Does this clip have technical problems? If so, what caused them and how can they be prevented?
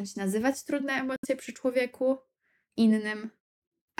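Yes. From 1.16 to 1.25 s the speech cuts to silence, most likely a Bluetooth dropout: packets missed their delivery deadline and were discarded, and the speech resumes further along. The waveform shows a flat gap, and the spectrogram a blank vertical band. Keeping the headphones close to the source, away from 2.4 GHz interference, prevents this.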